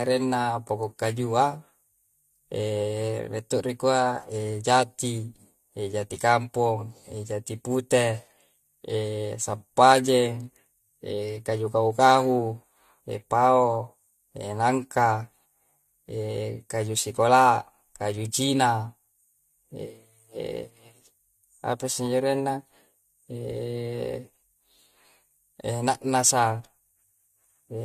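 Throughout, generation loss makes the speech swirlier and more hollow than a single AAC pass near 64 kbit/s would, likely from several re-encodes, with nothing above 14.1 kHz.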